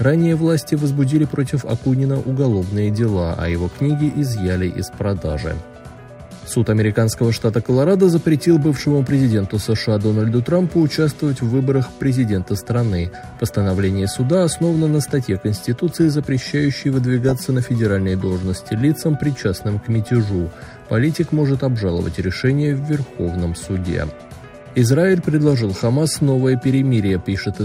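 DAB burbling appears at 2.36 s and again from 17.29 to 17.32 s. Bit errors around a tenth to a fifth of a percent slipped past error correction, corrupting MP2 samples across what sounds like several frames. Short blips of noise land in single sub-bands.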